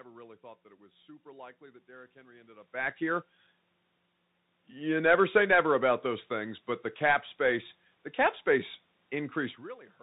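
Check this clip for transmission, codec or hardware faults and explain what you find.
There is one fault, present for the whole clip: the Bluetooth CVSD headset codec. Throughout, the speech sounds narrow and muffled, with nothing above about 4 kHz, a granular hiss underneath, scratchy s sounds, and loud bright moments breaking up. That plainly audible damage fits a 64 kbps CVSD link. Each sample carries only an up-or-down step whose size adapts, so fast loud changes outrun it. The background room noise and the level shifts near 2.5 s and 9.5 s, where the talker moves relative to the microphone, are part of the recording rather than system faults.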